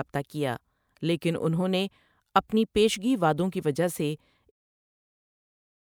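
There are no technical faults to describe, so there is nothing to place in time order.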